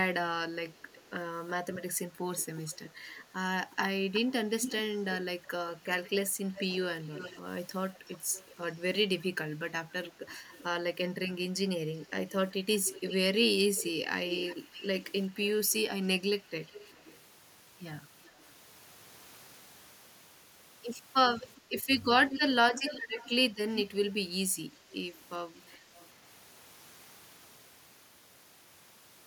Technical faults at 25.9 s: echo leak

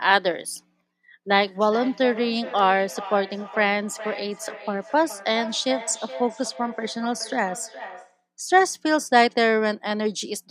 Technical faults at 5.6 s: feedback echo between two devices

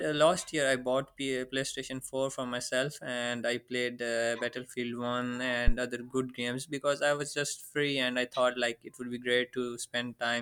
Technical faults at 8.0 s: none

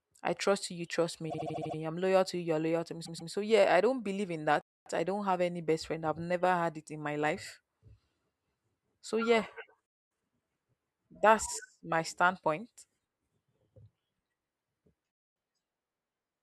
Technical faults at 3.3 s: repeated frames

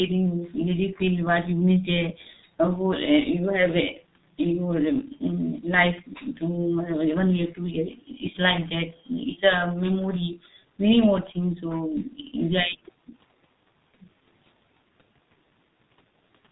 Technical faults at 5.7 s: G.723.1 codec

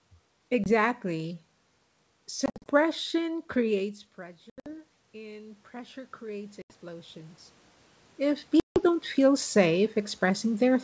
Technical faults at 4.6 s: automatic gain rising; packet loss on an ADPCM call

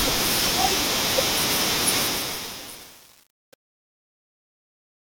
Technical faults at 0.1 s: none

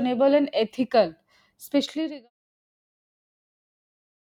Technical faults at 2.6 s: none

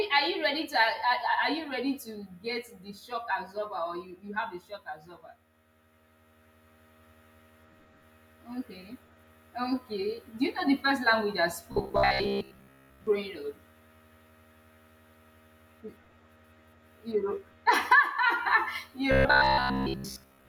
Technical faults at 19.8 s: robotic sound from repeated short buffers

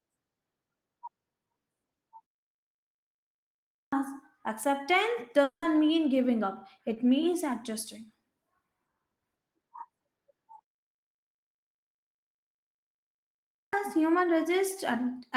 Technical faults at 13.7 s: clipped start after a pause

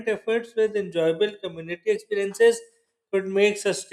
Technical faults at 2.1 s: drift correction step

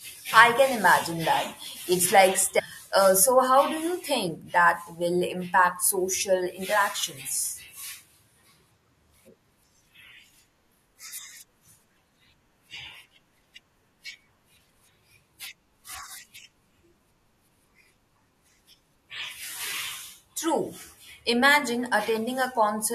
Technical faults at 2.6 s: stream segment skipped

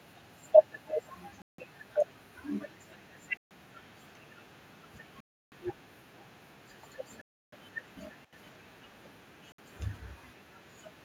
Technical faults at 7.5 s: Bluetooth stall

